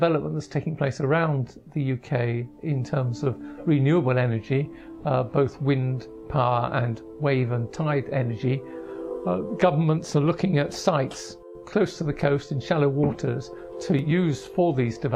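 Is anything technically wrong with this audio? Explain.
No, nothing technically wrong stood out on listening to this audio.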